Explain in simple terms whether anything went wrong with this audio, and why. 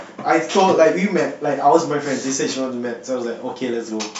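Nothing went wrong with this audio, as no fault can be heard anywhere in the speech.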